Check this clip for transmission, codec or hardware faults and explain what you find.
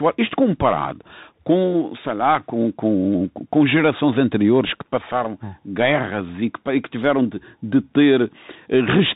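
Yes, there is one fault, and it lasts the entire clip. The speech sounds boxed-in, with nothing above 4 kHz, scratchy s sounds, a grainy hiss underneath and distortion on loud bright moments. This is a Bluetooth CVSD headset codec. Its one-bit up-or-down steps, consistent with a 64 kbps stream, cannot keep pace with fast high-frequency swings.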